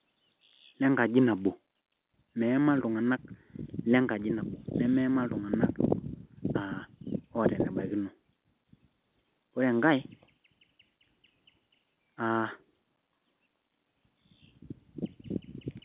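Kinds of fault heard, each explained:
Nothing stood out on listening to this speech clip.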